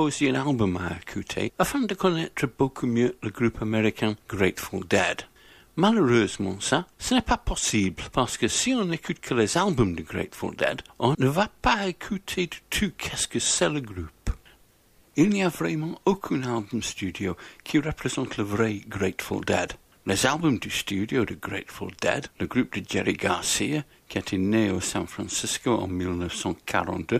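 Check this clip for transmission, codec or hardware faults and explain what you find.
Nothing in this one stands out as a transmission, codec or hardware problem; it all comes through just as you'd hope.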